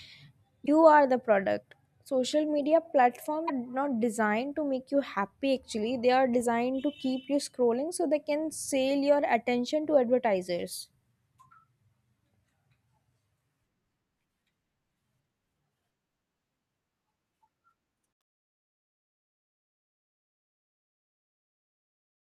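At 0.64 to 0.69 s and 3.45 to 3.50 s, just before "not designed to make", damaged data in a compressed stream causes brief glitches as the decoder loses sync.

The fade-out begins around 18 s. From 18.13 s it shows truncation distortion on a fade. Too few bits survive, which fits an 11-bit stage with no dither. From 19.31 s to the end, the tail turns gritty.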